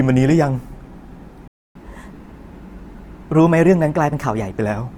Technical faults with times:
0.00-4.97 Opus compression
1.48-1.75 playback stall
1.75-4.50 catch-up at higher speed

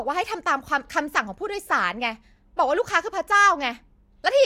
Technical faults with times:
none

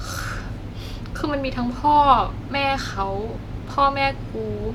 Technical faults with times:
none

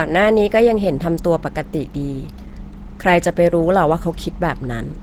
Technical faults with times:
0.00-5.03 Opus compression

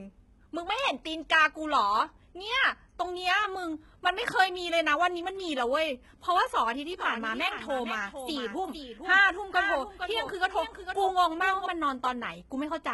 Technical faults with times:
0.00-12.94 HE-AAC compression
7.00-11.66 doubled audio track

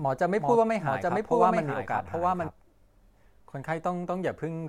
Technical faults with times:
0.00-2.48 doubled audio track

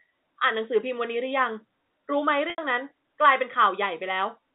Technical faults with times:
2.50-2.58 packet loss with pitch repetition

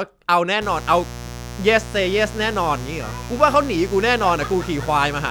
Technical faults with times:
0.61-5.30 mains buzz

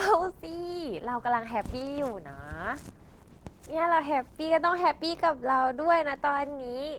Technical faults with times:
0.00-6.99 Opus voice compression

